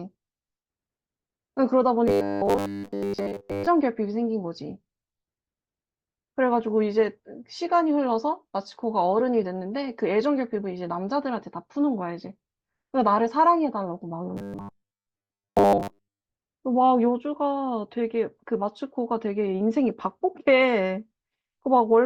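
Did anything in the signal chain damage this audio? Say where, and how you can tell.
Yes. From 2.08 to 3.69 s and 14.37 to 16.26 s, the speech becomes robotic sound from repeated short buffers. A rigid metallic buzz sits at 100 Hz. A starved driver buffer likely looped chunks of about 10 ms, replacing most of the real audio.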